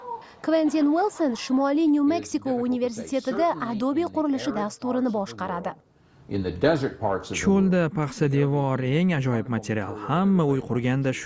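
No technical faults can be heard anywhere in this recording.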